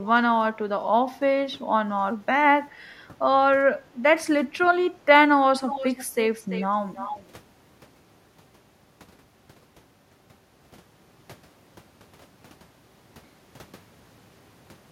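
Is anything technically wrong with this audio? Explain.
Yes, two faults are audible.

Echo leak: faint at 0.04–0.08 s (400 ms delay), stronger at 5.67–6.05, 6.33–6.66 and 6.93–7.27 s (340 ms delay). Likely a far-end loudspeaker's residual escaping echo cancellation; spectrograms show ghost copies of preceding speech patterns.

Background gated by the echo canceller: at 3.84–4.0 s, room tone dips about 9 dB for roughly 150 ms, visible as a brief noise-floor notch in the waveform.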